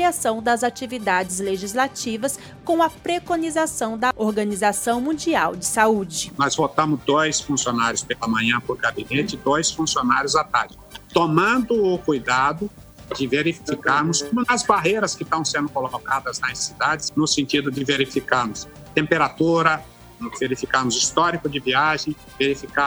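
No technical faults can be heard anywhere in the recording.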